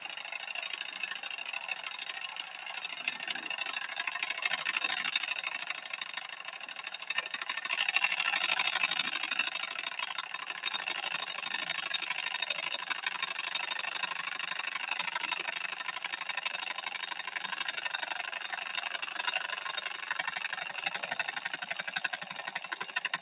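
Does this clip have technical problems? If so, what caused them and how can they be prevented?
Yes. Between 6.31 and 6.6 s the noise suppressor mistakes part of the sound for background noise and turns it down by about 4 dB for roughly a fifth of a second, so that stretch sinks. The call path is narrowband and stops at 4 kHz, which is normal for it. Lowering the suppressor's aggressiveness or turning it off for non-speech material would prevent this.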